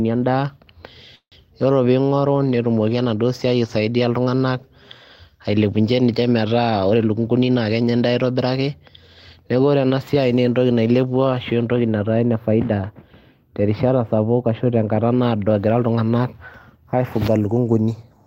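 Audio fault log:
1.15–1.35 s, call audio freeze: the speech stops and the last sound is stretched into a fading buzz that drops to silence for about 90 ms, likely because packets were held up and the jitter buffer ran dry. About 163 ms of fill is inserted, nothing is lost, and delay grows by 163 ms.
6.90–8.13 s, jitter buffer speed-up: the speech runs at 113% speed with unchanged pitch and sounds hurried. The receiver trimmed short pitch-period pieces repeatedly, roughly 150 ms in total, to shrink an overfull buffer and bring the delay back down.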